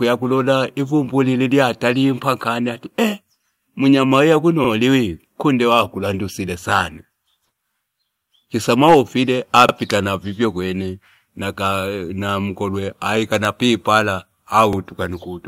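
Overlapping chunks in the processing chain make each 5 s block of this speech begin about 44 ms before the previous one finished, so that sliver plays twice at every join, heard as a brief stutter or click at 4.64, 9.69 and 14.73 s.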